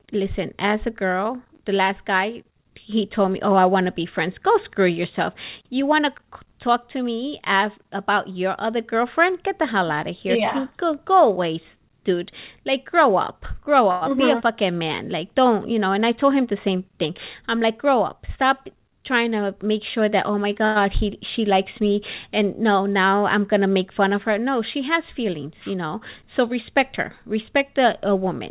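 At 13.91 to 14.04 s a short stall from a late packet holds the current sound for about 100 ms with a slight buzz or dip. The packet arrived late, the jitter buffer drained, and playback resumed where it left off, losing nothing.

After "don't you know", from 15.95 to 17.11 s, a jitter buffer speed-up runs the audio at 106% without changing pitch, trimming roughly 70 ms in small pitch-period cuts. The result sounds slightly rushed as the receiver shrinks its backlog.

Between "sure that oh my" and "he she likes me", at 20.65 to 20.78 s, the sound is stretched by about 102 ms into a brief fading buzz or hiss. This is likely a call audio freeze, where delayed packets emptied the buffer and the gap was filled before playback continued intact.

After "know so respect her", from 27.32 to 28.25 s, a second speed-up plays at 104% and removes around 50 ms. The G.711 path is band-limited, with nothing above 4 kHz, and both speed-ups keep their original pitch.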